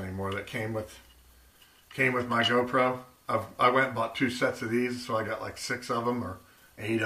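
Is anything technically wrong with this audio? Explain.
Yes. From 0.0 to 1.5 s there is mains hum, a steady low tone at 60 Hz sitting roughly 30 dB below the wanted sound. Power-line current has leaked into the signal path, most plausibly through a ground loop or a transformer close to the cabling, so the line frequency rides along under everything. On a spectrogram it shows as a thin horizontal line at 60 Hz that stops at 1.5 s. The waveform carries a faint regular ripple during that stretch.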